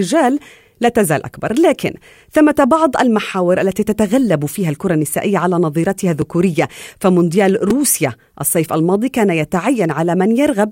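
At 6.22 s and 7.70 s the speech has a repeated buffer. New audio arrived late, so the device replayed its last 2.67 ms block, which fits a 128-sample buffer. It plays once extra at 6.22 s and three times at 7.70 s. Each is heard as a brief click or buzz.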